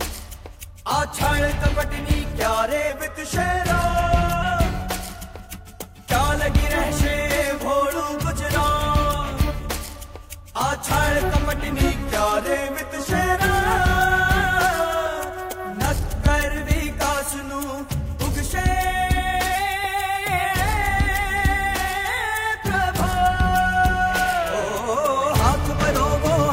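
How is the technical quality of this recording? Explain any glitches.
The recording has three pitch-and-speed glitches. From 2.90 to 4.42 s and from 11.74 to 13.38 s, playback slows by 6.4% and drops about 114 cents. From 19.55 to 20.44 s it speeds up by 6.4% and rises about 107 cents. Each time the sound detunes by roughly a semitone, then snaps back to normal. This is likely a drift correction step: clock-matching software abruptly changed the playback rate to refill or drain its buffer.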